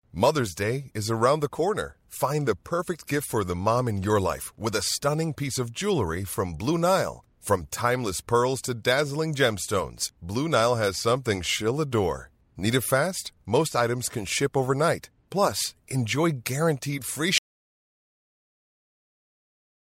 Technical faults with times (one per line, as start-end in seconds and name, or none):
17.38-19.91 audio dropout to silence